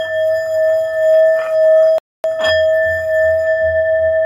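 At 1.98 s the sound stops dead and stays silent until 2.24 s, a rebuffering stall of roughly a quarter second (about 258 ms added). The player exhausted its downloaded audio and waited for more before continuing. Unlike a dropout or packet loss, where a gap replaces material and the sound jumps ahead, playback here picks up exactly where it halted, so nothing is missing; the clip is simply stretched by the pause.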